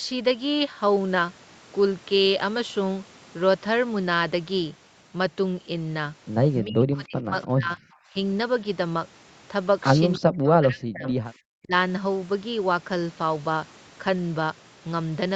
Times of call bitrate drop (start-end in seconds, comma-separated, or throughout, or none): none